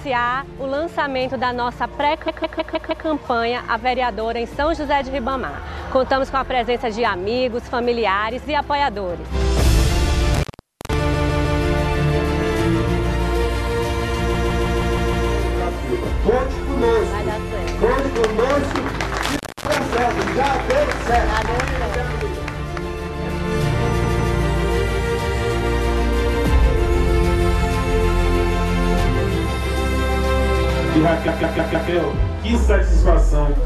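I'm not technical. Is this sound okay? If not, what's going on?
No, there are two problems. First, repeated frames: a short chunk of about 0.16 s replays several times, giving a stutter, at 2.28, 11.13, 14.34, 24.04 and 31.27 seconds. Second, an intermittent contact, like a loose plug, makes the sound crackle and drop out briefly at 10.34 seconds for about half a second and at 19.23 seconds for about a quarter second.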